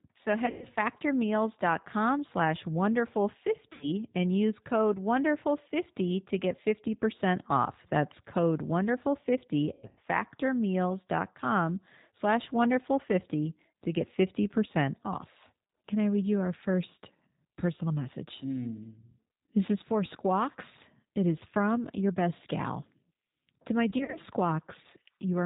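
Throughout, the speech carries the rough, slightly synthetic texture of the G.729 codec at 8 kbit/s. Its filter-and-pulse model rebuilds the voice coarsely, and a spectrogram shows nothing above 4 kHz, with a flat ceiling cutting across every frame.

VoIP packet loss concealed by the speech codec breaks in at 0.46 to 0.66 s, 3.73 to 3.86 s, 9.73 to 9.99 s and 23.90 to 24.19 s. The decoder stretches its last pitch and filter into a fading buzz or coloured noise, seen as smeared harmonics and a sagging waveform envelope.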